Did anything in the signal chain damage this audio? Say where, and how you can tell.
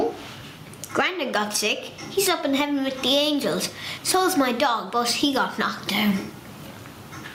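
Yes, there is gain pumping throughout. The level swings by around 15 dB. The likely cause is input gain set far too high, with a fast limiter or compressor clamping every peak and squashing the dynamics.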